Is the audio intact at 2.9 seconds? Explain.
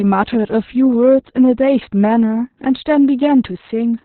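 No. At 2.9 seconds the speech carries Opus voice compression, which affects the whole clip. The codec has fallen back to its SILK linear-prediction mode in narrowband, so nothing sounds above about 4.3 kHz, and the excitation is coded so coarsely that the voice turns muffled, hoarse and faintly robotic. That fits a bitrate around 6 kbps. A simple low-pass filter would dull the voice just as much but leave it smooth, without this rough, synthetic grain.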